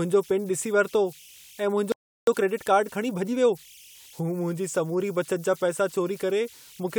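A speech recording runs throughout with converter idle tones. An undithered delta-sigma converter, given a low-level input, settles into repeating bit patterns, and here those produce a tone somewhere around 3 kHz sitting about 27 dB below the signal. It is most exposed in the pauses between phrases and turns to a grainy texture beneath the quieter stretches of speech, with its pitch tied to the small offset at the converter input. At 1.92 s, just after "वरितो ऐं", a playback stall cuts the audio off mid-flow and leaves silence for about 0.35 s, until 2.27 s. The likely cause is the player running out of buffered data or its output thread being blocked, so nothing reached the output until it recovered. Sound then resumes where it stopped. From 2.27 s to 3.67 s a time-compressed catch-up follows, in which the player works off the backlog built up during the gap by dropping short segments and cross-fading across the joins. 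The speech there runs at roughly 1.25 times normal speed while keeping its pitch.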